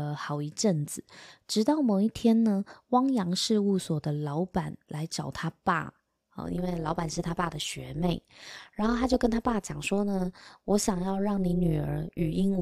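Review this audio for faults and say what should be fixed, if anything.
From 6.46 s to the end at 12.62 s, the speech carries overlap-add ripple: a metallic buzz around 200 Hz, with level swinging about 11 dB once per frame because the resynthesis windows overlap without summing to constant gain. To prevent it, choose a window and hop size satisfying the constant-overlap-add condition, or normalise by the summed window.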